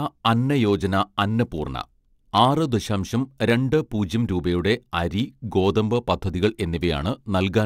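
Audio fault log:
throughout: block size mismatch (truncated), a steady 100 Hz buzz riding under the speech, because one stage writes blocks slightly longer than the next stage reads and the tail of each block is dropped. Each cut leaves a discontinuity every 10 ms, and because so little is dropped, the speech plays at essentially its normal speed (1.0x) and pitch. On a spectrogram this shows as evenly spaced harmonics at 100 Hz and its multiples across all frequencies. The waveform has regular jumps at the block boundaries.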